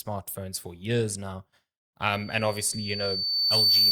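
From 2.13 s, loudspeaker feedback squeal: the microphone re-amplifies its own loudspeaker. A 4.6 kHz tone swells for about a second and a half, ending about 10 dB above the speech.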